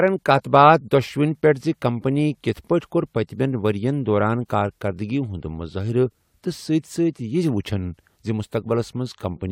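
No technical faults are audible anywhere in the speech.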